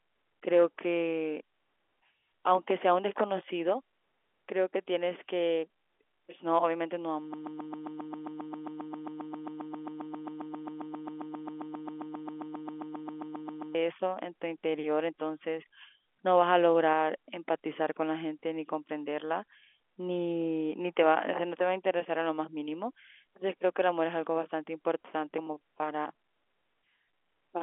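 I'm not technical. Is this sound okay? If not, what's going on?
No. From 7.34 to 13.75 s the speech turns into a broken-record loop: a snippet about 0.13 s long repeats back to back for over six seconds. The likely cause is a stalled player or stream resending its last fragment, so whatever was said then is lost. The narrow telephone-line sound comes from G.711 telephone coding.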